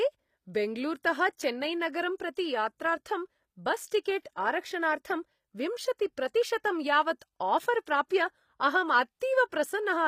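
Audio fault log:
Throughout: HE-AAC compression, likely. The treble sounds rebuilt rather than real, with plainly audible codec damage and nothing above 15.5 kHz. Upper bands copied up from lower ones don't match the true harmonics, which points to a low bitrate around 24 kbps.
3.24 to 4.71 s: CD scratch ticks, seven of them at a steady spacing of roughly five a second. The longest lasts only a couple of milliseconds. Each turn of the disc hits the same blemish, and the player interpolates or mutes the samples it can't recover.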